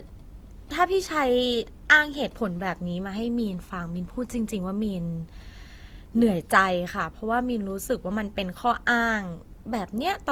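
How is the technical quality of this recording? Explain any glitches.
The quality is audibly degraded by generation loss throughout the speech. It sounds swirly, hollow and smeared, with blurred attacks, likely from about three lossy re-encodes, consistent with Opus near 48 kbit/s. A spectrogram shows smeared onsets, with nothing above 20.2 kHz.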